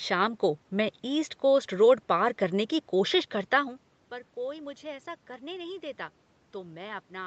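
A speech recording, and nothing is technically wrong with it.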